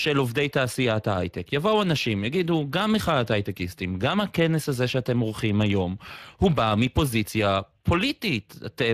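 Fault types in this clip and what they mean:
Speex codec: The speech passes through a CELP speech codec that can spare only a few bits for the excitation. This leaves it plainly hoarse and noisy throughout, with nothing heard above about 15.4 kHz.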